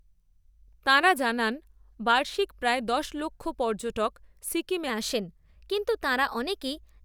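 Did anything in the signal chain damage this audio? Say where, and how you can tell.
Yes, at the playback stage: a wrong sample rate from 4.89 s to the end, right after "দশ লক্ষ পর্যটক সিকিমে". The samples are clocked out faster than they were captured, with no resampling, which fits 44.1 kHz material played at 48 kHz. Speed and pitch therefore rise together: the speech hurries along about 1.09 times faster and lifts by roughly 1.5 semitones, so the voice suddenly sounds higher and more rushed for the rest of the clip.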